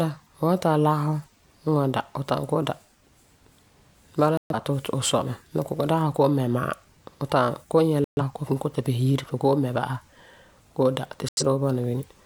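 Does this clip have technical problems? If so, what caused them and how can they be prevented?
Yes. The speech has three digital broadcast dropouts, at 4.37 to 4.55 s, 8.04 to 8.22 s and 11.29 to 11.43 s. The receiver stopped getting decodable frames, either because the signal faded or because frames failed their error check, so it muted until clean frames arrived again. Each hole is silent for about 130 ms, about 85 ms in the last, which fits two or three lost frames. Whatever was said in those gaps is gone. Stronger reception, such as a better-placed antenna, a cleaner signal path, or capturing the stream directly rather than off air, would prevent it.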